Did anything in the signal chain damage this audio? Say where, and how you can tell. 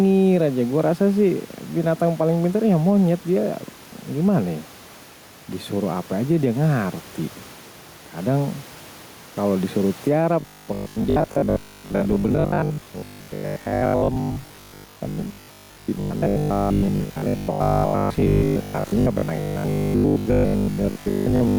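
Yes. Gain pumping runs through the whole speech clip, a gain swing of roughly 5 dB, with the room noise sitting about 28 dB below the voice. That points to call processing, likely an automatic gain stage pushed too hot and clamped by a fast limiter.

From 10.40 s, just after "kalau disuruh", to 21.58 s the voice becomes a rigid 50 Hz buzz that still tracks the phrasing, with most of the real audio missing. That is robotic sound from repeated short buffers at the driver or buffer stage. A 20 ms loop fits a 20 ms buffer, likely starved of input, unlike codec warble, which has no fixed pitch.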